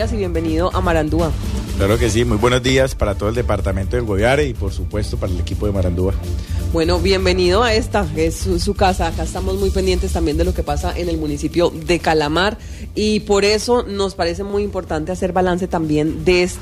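Three isolated clicks land at 2.69 s, 3.81 s and 14.50 s, each a short, hard tick with no gap in the sound around it. Each is likely dropped samples: well under a millisecond of the stream goes missing, so the waveform leaps straight from one value to a later one. That step shows as a sudden vertical discontinuity in the waveform and as a thin, full-height line across the spectrogram at each time.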